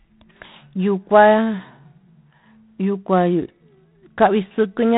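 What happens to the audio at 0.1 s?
At 0.1 s the speech already carries the G.726 ADPCM damage that runs through the whole clip. The codec sends only a few bits per sample describing the difference from an adaptive prediction. At this coarseness the quantisation error becomes a harsh, rasping hiss that rises and falls with the speech level, which fits the 24 kbit/s mode. Nothing above 3.9 kHz survives, so the sound is dull and telephone-narrow.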